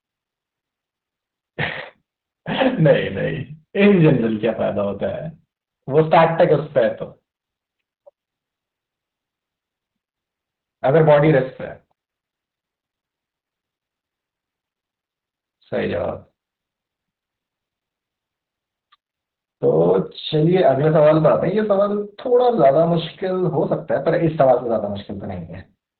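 Throughout the speech, Opus voice compression is heavy. Nothing is audible above about 4.4 kHz, so the band is cut to narrowband and the voice sounds muffled and telephone-like. With so few bits left for the excitation, the linear-prediction coder renders it coarsely, giving a hoarse, slightly robotic, buzzy texture. The narrow band and strong coding damage point to the SILK speech mode at a very low bitrate, around 8 kbps.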